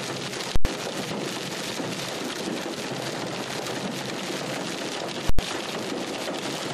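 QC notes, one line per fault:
0.56–0.65 s and 5.29–5.39 s, invalid numbers at full scale: a calculation blew up to infinite or invalid values that were pinned to maximum level, so each 93 ms span, which fits a 4096-sample block, opens and closes with a loud pop and nothing between.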